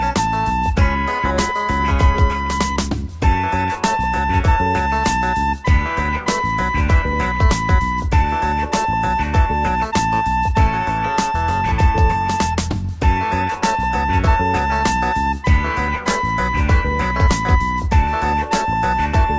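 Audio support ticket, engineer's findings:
No faults found in the audio; nothing to report for this ticket.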